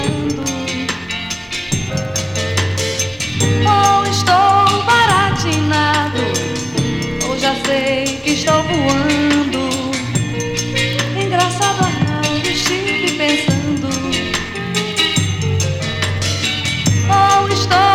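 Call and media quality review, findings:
No faults found in this clip. Nothing to escalate to the capture, processing or transport components.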